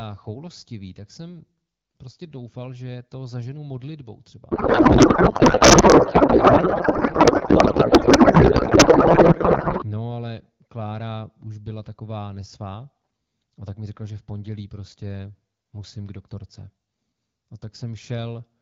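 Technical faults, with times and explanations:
4.51 to 9.84 s, codec payload misread: right after "to zaženu modlitbou třeba" the speech gives way to garbled noise and warble that barely tracks it. The AMR-WB decoder, running at 12.65 kbit/s, is receiving frames that look valid, but their fields sit in the wrong bit positions. This fits octet-aligned AMR packing being read as bandwidth-efficient, so every parameter is decoded from the wrong bits until both ends agree again.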